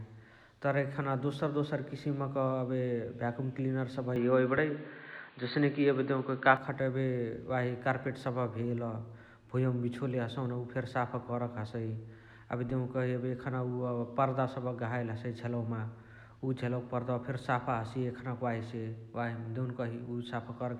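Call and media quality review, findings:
Speech goes dull and boxy 4.16–6.57 s, nothing above 4.6 kHz, level jumps a few dB, faint new noise, no gap. Likely input switched to a poorer device.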